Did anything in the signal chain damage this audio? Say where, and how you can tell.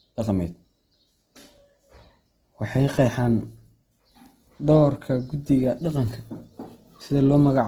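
Yes. The damage sits at the codec stage and runs through the whole speech clip. The voice sounds rough and grainy, with harmonics smeared into a noisy texture. The likely cause is Opus compression in its CELT music mode, consistent with a very low bitrate around 16 kbps. Short of bits, the encoder keeps each band's energy but refills its fine detail with folded or noise content. On a spectrogram, harmonic lines break into speckled noise, yet content still reaches about 20 kHz without spectral holes.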